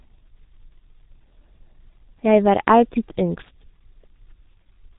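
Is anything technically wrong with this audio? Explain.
Yes. The speech has been through the G.723.1 codec, and the damage is heavy and lasts for the whole clip. The codec models the voice in 30 ms frames and spends very few bits on each, which fits its 6.3 kbit/s mode. Everything above about 3.8 kHz is missing, so the sound is muffled. Because the vocal-tract model updates so slowly, quick consonants smear into neighbouring sounds, and the voiced parts take on a rough, hoarse buzz.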